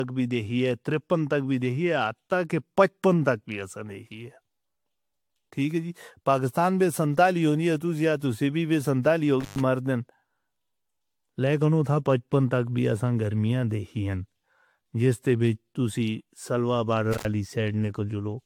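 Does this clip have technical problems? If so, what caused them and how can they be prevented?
Yes. Throughout the 18-second speech clip the sound is swirly, smeared and hollow, with blurred consonant attacks and nothing above 19.2 kHz. The cause is likely generation loss: the audio appears to have been decoded and re-encoded with AAC roughly five times, at a rate that fits about 96 kbit/s. Each pass quantises on a shifted frame grid, so noise and spectral gaps build up beyond what one encode at that bitrate would produce. To prevent it, keep edits in a lossless format and encode to AAC only once, at the final export.

There are two intermittent contact dropouts. The first runs from 9.41 to 9.60 s, with the signal gone for about 115 ms. The second runs from 17.13 to 17.25 s, with the signal gone for about 100 ms. In each, a loose cable or connector briefly breaks the audio path. The sound cuts out with crackle at the make and break points, and only faint hiss remains while the connection is open. 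To prevent it, reseat or replace the cable and connectors and secure them against movement before recording.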